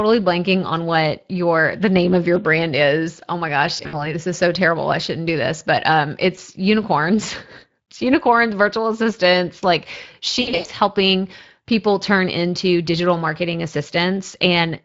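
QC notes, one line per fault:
Throughout: Speex codec. The speech sounds plainly noisy and hoarse, which fits Speex at about 20 kbps with too few excitation bits for clean CELP reconstruction.
3.77–4.14 s, 6.35–6.39 s, 10.41–10.69 s: VoIP packet loss concealed by the speech codec. The sound turns buzzy or to coloured noise that fades as the decoder extrapolates its last pitch and filter. About 100 ms, 20 ms and 200 ms are missing, and the longest gaps run 60 ms and 100 ms.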